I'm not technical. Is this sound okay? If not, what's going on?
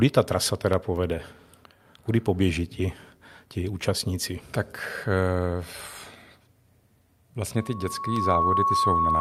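No. From 7.55 s to the end, a loudspeaker feedback squeal appears: the microphone picks up its own loudspeaker, and a 1.1 kHz tone swells over under a second into a loud whistle.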